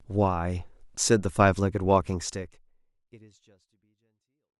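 Nothing is technically wrong with this speech clip, which ends with a smooth fade-out starting around 2 s in.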